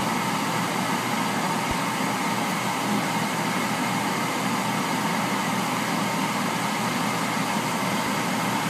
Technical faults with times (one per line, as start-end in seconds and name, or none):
1.71-1.73 loud pop
7.92-8.09 loud pop